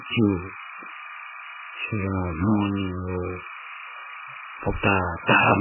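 From start to finish, timecode bleed sits behind the speech: linear timecode running at 29.97 frames per second has leaked in from a neighbouring track or cable, roughly 20 dB below the talker. Its square-wave code flips between pitches near 1 kHz and 2 kHz, giving a constant chirping warble. On a spectrogram it shows as two steady horizontal bands with dense vertical striping at the frame rate. In the waveform it appears as a buzzy floor that never drops out between phrases.

Across the whole clip the speech is also muffled and watery, most likely from MP3 compression, with the damage heavy enough to fit a very low bitrate around 8 kbps. Starved of bits, the encoder has removed all content above 3 kHz and discarded weak frequency lines, which flicker in and out from frame to frame. The result sounds swirly, with smeared consonant attacks. A spectrogram shows a hard ceiling at 3 kHz and patchy, blocky gaps below it.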